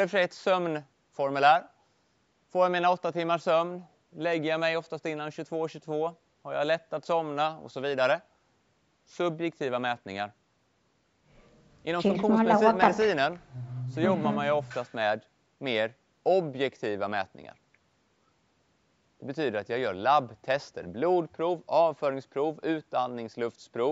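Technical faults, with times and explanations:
Nothing stood out on listening to the speech, which carries the ordinary band-limiting of call microphone processing with no content above 8 kHz.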